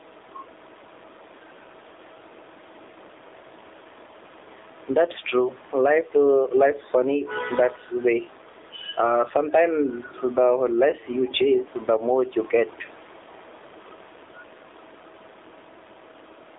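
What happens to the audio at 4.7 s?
At 4.7 s, as across the whole clip, gain pumping is audible: the gain swings by roughly 10 dB, pulled down on every loud sound, so loud and soft parts sit closer in level and the sound is squashed. This is likely a fast limiter fighting excessive input gain. The room noise itself sits about 32 dB below the speech.

The AMR narrowband mobile codec is also present throughout. The speech is confined to a 300 Hz to 3.7 kHz line band, with nothing above 3.8 kHz, and it has a buzzy, synthetic edge from the codec's pulse-driven vocal-tract model. The plainly audible damage points to a low rate near 7.4 kbps. That artificial texture separates it from simple band-limiting, which only dulls the sound.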